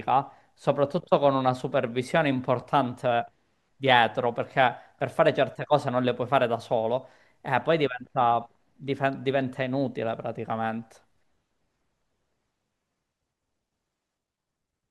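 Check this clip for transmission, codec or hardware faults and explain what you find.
One transmission fault shows up in the speech, a single dropout over the Bluetooth link. The light lossy compression underneath is working as expected.

Lost LE Audio frames at 2.61 s: about 10 ms of audio never arrived, which fits one missing LC3 frame. The decoder filled the gap by repeating the previous frame's spectrum with its signs randomised. Because the gap is so short, no fade-out sets in. The result is a tiny noisy smear, where the sound briefly turns grainy before the signal resumes.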